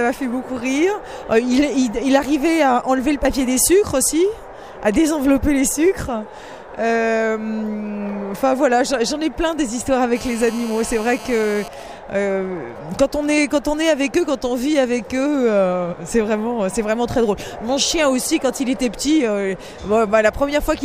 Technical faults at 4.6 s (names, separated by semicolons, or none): none